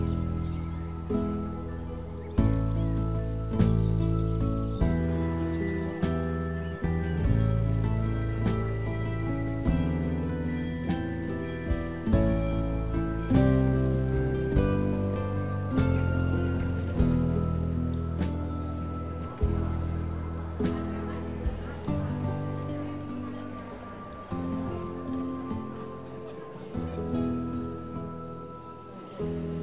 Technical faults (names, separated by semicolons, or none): none